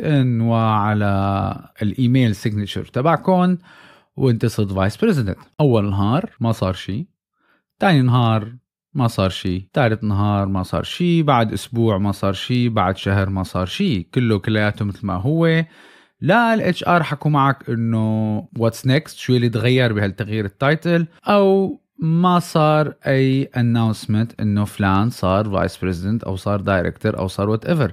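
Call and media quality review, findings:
Block of digital silence, 5.54 to 5.58 s, about 46 ms. Speech drops abruptly to silence and returns. Probable component: playback or render buffer underrun. Gap length fits one unfilled 2048-sample output buffer.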